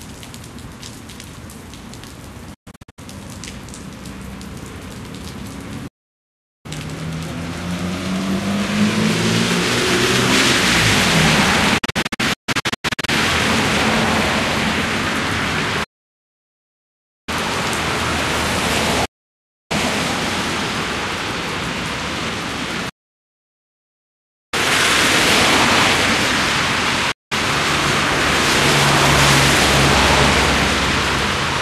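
Everyday sounds, interrupted by a digital broadcast dropout seven times. The receiver loses good frames and mutes, fading out over about 8 ms. Gaps sit at 2.54–2.99 s, 5.87–6.66 s, 11.78–13.09 s, 15.83–17.29 s, 19.05–19.71 s, 22.89–24.54 s and 27.11–27.32 s. The first and third are scattered short holes, at most 144 ms each. The rest are solid silences lasting up to 1.63 s. Their lengths step in units that fit 24 ms frames. The sound sent during each gap is lost.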